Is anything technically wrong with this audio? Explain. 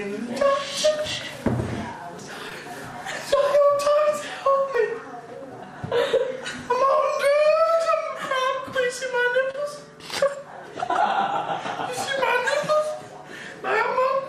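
Yes, there's short concealed packet loss at 2.49–2.52 s, 4.50–4.55 s and 9.51–9.55 s. Roughly 20, 40 and 30 ms of audio didn't arrive in time, so the receiver extended the preceding sound to bridge each gap, then blended back, leaving a brief smear or wobble.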